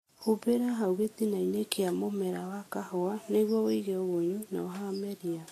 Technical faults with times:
0.00-5.52 Vorbis compression

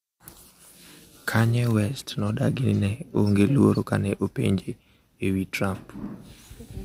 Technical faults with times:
none

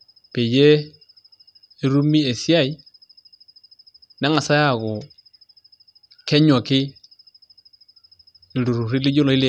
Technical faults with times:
none

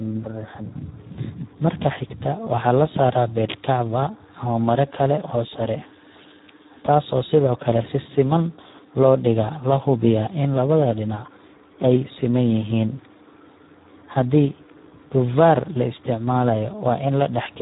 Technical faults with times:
0.00-17.61 Speex codec
14.70 electrical switching spike

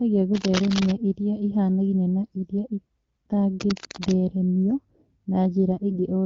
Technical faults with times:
0.35-0.96 cable scratch noise
3.60-4.12 cable scratch noise
5.90-5.96 AMR bit errors

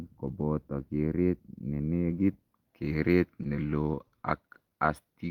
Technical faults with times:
3.43-4.91 scattered short gaps

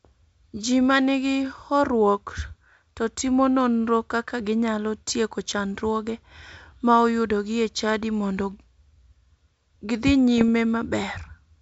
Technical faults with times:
10.38-10.49 bit errors on an ADPCM link

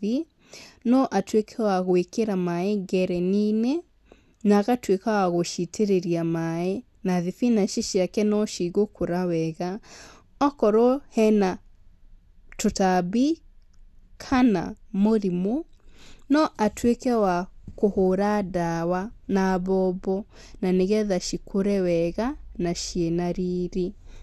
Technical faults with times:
0.00-24.23 MP2 compression

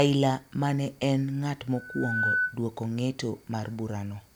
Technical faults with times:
1.76-2.58 loudspeaker feedback squeal

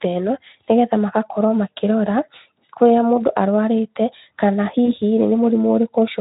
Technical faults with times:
4.85-4.89 VoIP packet loss concealed by the speech codec

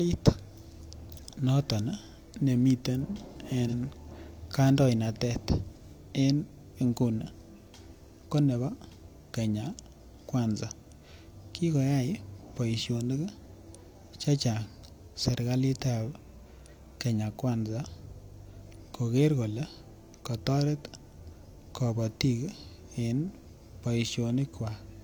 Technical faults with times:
3.68-3.74 AAC frame loss with concealment

